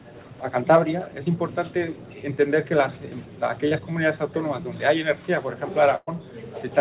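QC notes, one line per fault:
3.68–3.79 s, short concealed packet loss: about 20 ms of audio never arrived in time, so the receiver stretched the preceding sound over roughly 28 ms and blended back in. You hear a quick smear or wobble, with a sliver of about 13 ms dropped.
5.96–6.09 s, burst of packet loss: around 120 ms went missing in one run. The receiver kept extending the last sound for about 114 ms while fading it, giving a held buzz or hiss, then about 20 ms of silence before the audio picks up further along. Through the narrowband G.711 A-law path, with nothing above 4 kHz, the concealed stretch sounds dull.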